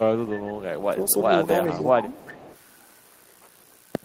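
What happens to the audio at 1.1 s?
Between 1.08 and 1.13 s a brief echo leak surfaces: a faint, delayed copy of the speech arriving about 407 ms after the original, roughly 25 dB below it. The likely cause is a far-end loudspeaker whose echo canceller let a scrap of the returned signal through. It sounds like a ghost under the talker. On a spectrogram it appears as a weak smear repeating the harmonic pattern from 0.41 s earlier, and on the waveform as a tiny added ripple.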